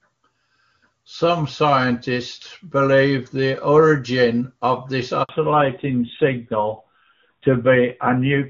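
At 5.23 s the sound cuts out for about 60 ms, until 5.29 s, a handover gap. The call was passed from one network link to another, and for that moment no speech frames reached the decoder. The sound doesn't stop with a click but fades within a few tens of milliseconds into silence. On a waveform this shows as a short flat stretch, and on a spectrogram as a narrow vertical band empty at every frequency.

From 5.29 s to the end, the audio falls back to narrowband. Before the gap, the clear, full HD Voice sound fits AMR-WB at its top rate of about 23.85 kbit/s. Afterwards the sound is duller, boxier and rougher, consistent with a low narrowband rate near 7.4 kbit/s. On a spectrogram the energy above 4 kHz disappears at the gap, leaving a sharp horizontal ceiling that persists through the last three seconds.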